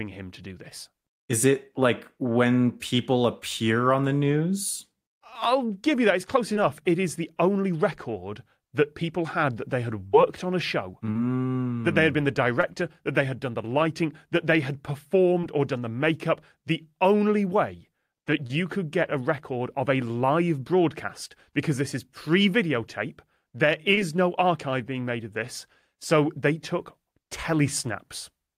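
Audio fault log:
6.53–6.57, 11.11–11.17, 12.61–12.65, 15.41–15.45, 18.47–18.51, 23.95–23.99 s, short concealed packet loss: 20 to 40 ms of the speech stream failed to reach the decoder in time, and the receiver bridged each gap with 14 to 38 ms of synthetic continuation before blending back into real audio. Each one is a brief smear or wobble, right after "on a show", between "lighting that they had" and "or done the makeup", and between "is pre videotape there" and "no archive being made".
10.07–10.15 s, burst of packet loss: about 60 ms of consecutive speech data arrived too late or not at all, and the receiver extended the last sound for about 63 ms while fading it down. This gives a held buzz or fading hiss in place of the lost audio. The speech then resumes from a later point, so the section in between is simply gone rather than delayed.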